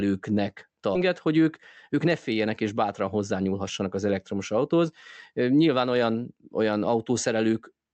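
In this speech clip, roughly a second of audio was dropped at 0.95–0.97 s, a skip ahead: playback jumps forward with no filler, so the two sides of the cut butt together and a stretch of talk simply vanishes. Right after, with more audio buffered than it targets, the jitter buffer repeatedly trimmed pitch-period-sized pieces. This jitter buffer speed-up runs from 1.07 to 1.53 s and again from 1.93 to 3.87 s, just before "az elektromos autóhoz", at about 107% speed. It removes roughly 40 ms and 150 ms respectively, so the speech sounds hurried while its pitch stays the same.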